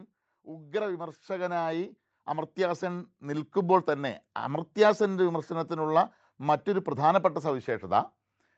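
From 0.31 s to 4.78 s the speech and the room noise behind it swell together, climbing steadily by about 13 dB over more than four seconds rather than jumping. This is automatic gain rising: the call's gain control judged the incoming level too quiet and raised its gain gradually. Because it amplifies everything, the background lifts along with the voice. Throughout, the audio stops at about 8 kHz, which fits a wideband call codec.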